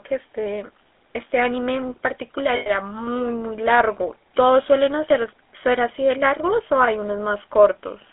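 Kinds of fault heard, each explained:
GSM full-rate codec: A buzzy, gravelly roughness colours the speech throughout, and the sound sits in a narrow telephone band of about 250 Hz to 3.6 kHz. This comes from GSM full-rate coding, which models the vocal tract, drives it with coarse, evenly spaced pulses, and fits a 13 kbps stream.
lost GSM frames: From 2.56 to 2.71 s the speech stops moving forward and freezes into a rough, metallic ring. Missing frames, consistent with about five 20 ms frames, were filled by repeating the last good frame's settings, so the sound is held rather than dropping out.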